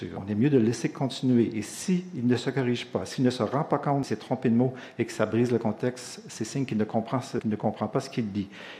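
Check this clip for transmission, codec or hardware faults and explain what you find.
Two short faults stand out, both from damaged data in a compressed stream. The first is at 4.03 s. The second runs from 7.38 to 7.40 s, about 20 ms. At each point, part of the coded stream was lost or corrupted. The decoder could not read those frames properly. It lost sync and had to hunt for the next valid frame header. Each event is a brief break in the sound, a chirp, squawk, click or short gap, before normal decoding resumes.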